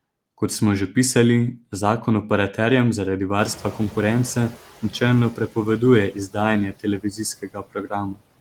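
Noise suppressor artifacts run through the whole clip. The suppressor pulls down whatever it judges to be steady background, band by band and frame by frame, cutting it by about 21 dB. The result is a background that dips in the gaps and swells back under the speech.

Noise suppressor catching up occurs from 3.38 to 4.55 s, just after "pisali zakon operaterjem zaradi". The room noise jumps by about 23 dB near 3.5 s, and the suppressor's noise estimate trails behind it. For about 1.17 s the louder noise comes through with only about 8 dB of reduction, sitting about 18 dB under the speech. It then sinks as the estimate adapts to the new level.

Speech cut by the noise suppressor follows at 5.34–5.57, 6.11–6.36, 6.72–7.2, 7.42–7.93 and 8.12–8.22 s. The suppressor treats parts of the speech as noise. It turns them down with the background, by about 14 dB at first and then by about 18 to 21 dB. 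Each affected stretch lasts around a tenth to a third of a second, so the affected speech comes across swallowed or faint.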